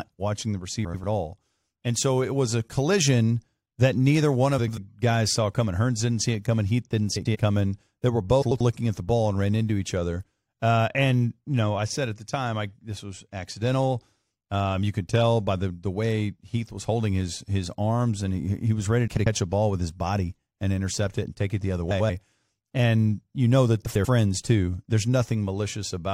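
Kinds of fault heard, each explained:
Frames out of order: two adjacent runs of about 93 ms each swap places, so seven brief stretches of speech play with halves exchanged, giving garbled flutter.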